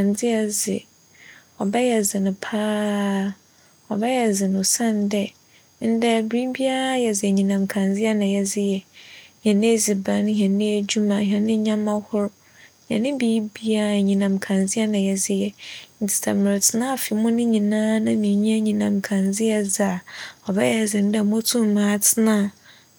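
No technical faults can be heard anywhere in this speech recording. At no point does anything in the recording or playback chain draw attention to itself.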